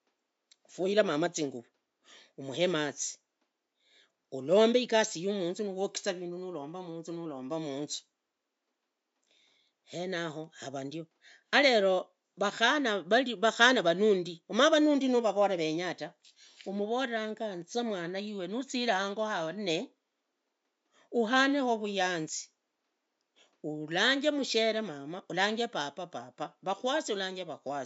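A speech recording with no technical faults. There is some background noise from the room, sitting about 53 dB below the speech.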